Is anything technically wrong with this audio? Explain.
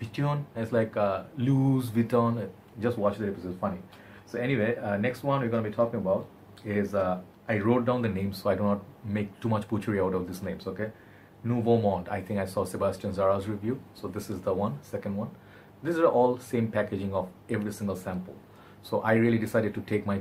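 No technical faults are audible.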